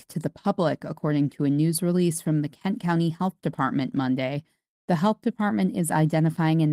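A speech recording, and nothing in it is technically wrong.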